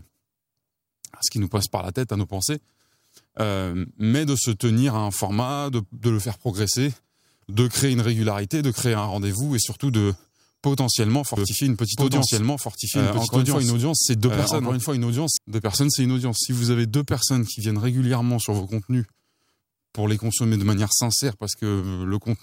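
From 11.37 to 15.37 s a doubled audio track appears: a second, equally loud copy of the speech trails about one and a half seconds behind, likely from a slower capture path.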